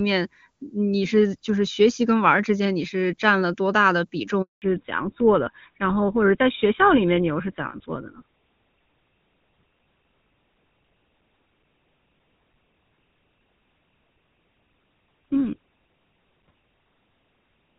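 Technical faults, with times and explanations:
4.42 to 4.62 s, handover gap: the sound dies away within a few tens of milliseconds and stays silent for 200 ms before resuming. This is the call being passed from one network to another. No speech frames got through while the link switched, so whatever was said in that window is lost. On a waveform it shows as a flat line between two sections of activity. On a spectrogram it is a clean vertical blank band across all frequencies.
4.62 s to the end, fallback to narrowband: right after the gap, the call drops out of HD Voice onto an older narrowband codec, likely GSM full rate. Everything above 4 kHz disappears from this point on, so the speech turns duller and rougher than before the gap. Before the switch, the wideband HD Voice coding carries energy up toward 7 kHz with little or no audible damage, which fits the top AMR-WB rate. On a spectrogram the upper region goes abruptly empty at 4.62 s, leaving a hard ceiling at 4 kHz.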